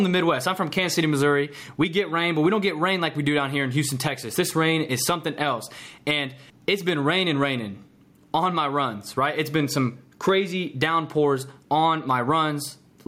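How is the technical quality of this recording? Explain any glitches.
The recording has one clear technical problem running through the whole clip. Gain pumping is present throughout, likely from input gain set far too high with a fast limiter clamping down on each loud syllable. The gain ducks by around 10 dB under the speech, leaving the levels squashed.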